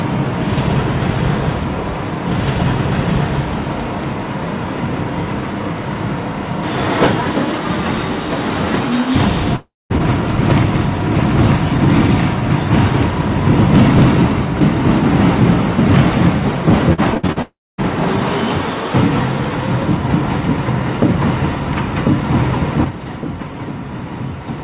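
At 9.56 s the sound smears into a buzzy tail that fades, then about 200 ms of silence before it resumes at 9.92 s. Roughly 340 ms never arrives, likely a long network dropout where the receiver stretched the last sound before giving up.

From 16.93 to 17.38 s it turns choppy and robotic: repeated packet loss punches five holes, the longest 57 ms, and each gets patched by repeating what came before, so about 37% of that stretch is filler.

Right after, at 17.42 s, a second long network dropout hits, again likely. It's the same fading buzz into about 250 ms of silence, with 360 ms missing before the sound returns at 17.80 s. Throughout, nothing sits above 4 kHz, which fits a narrowband G.711 call path.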